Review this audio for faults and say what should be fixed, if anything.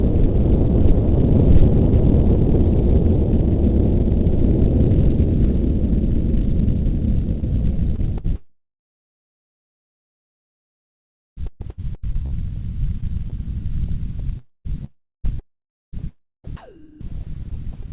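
Sound chopped by the voice detector runs from 7.40 to 13.34 s and from 14.38 to 17.90 s. The sender likely gated quiet passages, swapping about 3.5 s and 2.0 s for comfort noise. Disable voice activity detection on the sender for non-speech audio.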